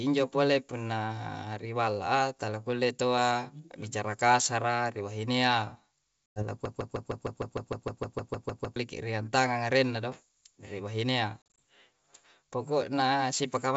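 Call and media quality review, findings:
Packet loss on an ADPCM call, 6.27–6.43 s: hard-edged silent hole, about 100 ms lost, which fits a handful of dropped packets. Decoder's adaptive predictor and step size lose sync with the sender, so speech resumes slightly distorted, settling within tens of milliseconds. Second instance 11.56–11.59 s: loss scattered over 160 ms, longest gap 40 ms, same slightly distorted re-entry. Component: ADPCM decode path.

Broken-record loop, 6.65–8.76 s: a 153 ms fragment repeats exactly, back to back, 14 times. Likely cause: player or stream stalled and kept resending its last held buffer. Audio due in those two seconds is gone. Component: playout/stream feed.

G.722 wideband path at 64 kbit/s: band extends to 7 kHz, faint upper-band hiss only.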